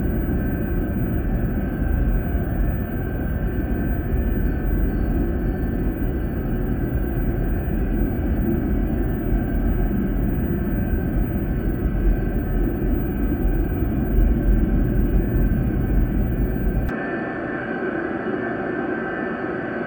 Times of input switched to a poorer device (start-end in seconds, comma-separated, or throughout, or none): 16.89-19.87